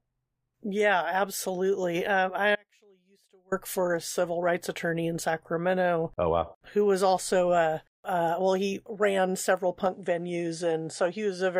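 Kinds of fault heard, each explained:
Audio dropout to a faint residue: The speech cuts out abruptly at 2.55 s and returns at 3.52 s, just before "for a civil rights", so just under a second of signal is lost. The gap is not true silence but holds a faint residue roughly 35 dB below the normal speech level. The sharp edges rule out a natural pause or fade, and the likely cause is a break in the signal path while the later stages stayed live.
Input switched to a poorer device: At 9.86 s, right after "well he ran several", the sound changes character through to the end of the clip, and the likely cause is the recording input switching to a different, lower-grade device. Nothing is present above 11.4 kHz from that point, so the top end turns duller. There is no silence at the switch, the level stays roughly the same, and a new noise floor appears about 50 dB below the speech.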